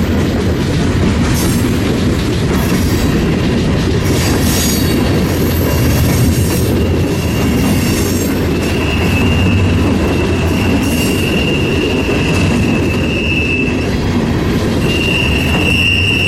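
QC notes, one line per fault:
9.37 s, dropped samples: a single sharp click, a thin vertical line across the spectrum, likely because well under a millisecond of samples went missing and the waveform jumped ahead. Unlike a dropout, no audible gap or silence follows, only the step.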